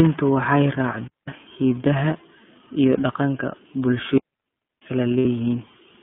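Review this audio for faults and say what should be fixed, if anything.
The whole clip has a boxed-in, slightly gritty and synthetic quality. Nothing is present below about 150 Hz or above about 3.4 kHz, and consonants sound rough. This is the iLBC codec. Each frame's excitation is coded on its own at a low rate, and the result fits the 13.33 kbps mode with 30 ms frames. The narrow line band removes the upper range where sibilance and presence live. To prevent it, carry the call on a wideband codec instead of narrowband iLBC.

Two clean holes of near silence interrupt the speech, with no hiss or crackle around them. The first runs from 1.08 to 1.28 s (about 0.2 s), and the second, longer one from 4.18 to 4.82 s (about 0.64 s). This is a digital wireless dropout. The radio link lost too much data, so the receiver muted with a very brief fade rather than output corrupted audio. To prevent it, keep the transmitter in clear line of sight, closer to the receiver, and away from interfering equipment.

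From 5.18 to 5.25 s, the speech briefly turns into a held, slightly buzzy and breathy vowel, then snaps back to normal at once. These are lost iLBC frames. For a gap of about 60 ms, which fits two missing 30 ms frames, the decoder repeated the last pitch cycle blended with noise. Recovery is immediate because each iLBC frame decodes without depending on the previous one. To prevent it, reduce packet loss on the network path or add redundancy or forward error correction.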